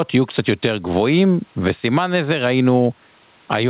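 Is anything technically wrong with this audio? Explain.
Yes. Gain pumping runs through the whole clip: the gain swings by around 15 dB, squashing the level differences. This is likely an input gain set far too high, with a fast limiter pulling it down on each peak. On a waveform the envelope looks flattened, with the room noise bulging up between loud passages; on a spectrogram the noise floor brightens in the pauses and darkens under the speech, all below the 4 kHz ceiling of the call codec.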